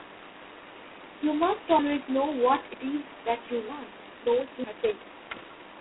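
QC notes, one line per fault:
throughout: G.726 ADPCM. Band-limited to roughly 250 Hz to 3.4 kHz with nothing above 3.9 kHz, carrying a harsh, rasping hiss that rises and falls with the speech level. The heavy quantisation noise comes from coding each sample as a coarse difference from a prediction, consistent with 16 kbit/s.
1.79 s, 2.74 s: audio missing between chunks. About 50 ms of speech drops out at each point, and the surrounding audio is butted together without silence, producing an abrupt skip. The spacing of roughly one second likely reflects audio being lost at processing-chunk boundaries.
4.14–5.80 s: time-stretched section. From 4.14 s to the end, the speech runs about 1.73 times faster while pitch stays unchanged, so delivery sounds rushed. This likely comes from stretching software that dropped short segments to shorten duration without shifting pitch.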